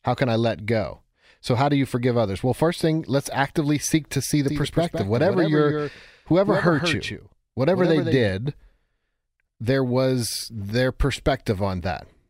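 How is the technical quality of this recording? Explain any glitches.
There's one clear glitch in this speech clip. From 4.48 to 8.30 s, right after "seek to see the", there's a doubled audio track: a second copy trails roughly 150 ms behind, about 5 dB quieter. It's likely a slower capture path picking the audio up twice, which gives a dry, abrupt slapback echo that cuts in and out sharply.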